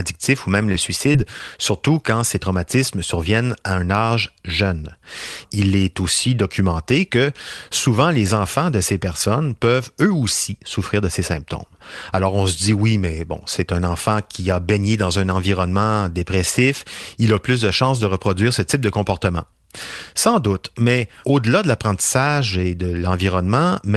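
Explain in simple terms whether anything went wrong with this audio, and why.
A few pieces of the speech were lost in transit and had to be rebuilt, all within the first couple of seconds.

Lost packet rebuilt from error correction: at 0.61 to 0.69 s, 0.74 to 0.76 s and 1.14 to 1.16 s, lost pieces were replaced by rough backup copies, which sound grainy and noisy.

Short concealed packet loss: at 0.72 to 0.76 s and 1.12 to 1.16 s, just before "surtout quand ces traumatismes", missing audio was guessed from the sound before it, leaving a brief smear or wobble.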